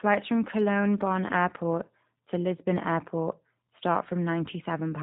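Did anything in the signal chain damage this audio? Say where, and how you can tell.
Yes, G.729 codec damage runs throughout the speech, at the codec stage. The band stops sharply near 4 kHz, so sibilants lose their hiss, and vowels carry a plainly audible rough, buzzy, slightly synthetic edge. This fits an 8 kbit/s G.729A encode. The codec discards the waveform and rebuilds each 10 ms frame from a vocal-tract filter, a pitch predictor and a few sparse pulses. That coarse excitation is what leaves the roughness.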